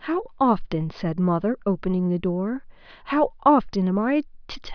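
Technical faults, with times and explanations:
No technical faults can be heard in this recording. The speech runs without any dropout, glitch or distortion.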